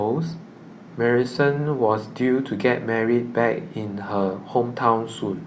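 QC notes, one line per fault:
No faults were heard in the speech clip. There is nothing to log against any time.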